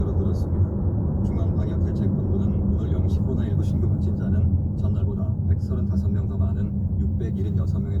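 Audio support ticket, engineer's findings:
Skip ahead at 3.17–3.19 s: about 0.7 s of queued audio dropped, in transit or by jitter buffer overflow, no concealment fill. Playback lurches forward, the sound on either side spliced almost directly together, with the missing stretch simply gone.

Jitter buffer speed-up at 4.43–4.56 s (126% rate) and 4.98–7.67 s (106% rate): buffer over target depth, receiver repeatedly trimming pitch-period-length slices, roughly 40 ms then 150 ms total. Sound runs faster at unchanged pitch, briefly rushed, then subtly hurried.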